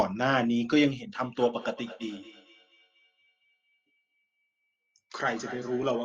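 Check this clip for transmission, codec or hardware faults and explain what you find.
One fault: feedback echo between two devices, from 1.15 s to the end. A second device in the room replays the far end, that microphone recaptures it, and neither echo canceller removes it, so the speech returns about every 200 ms, peaking at about 17 dB below the direct speech.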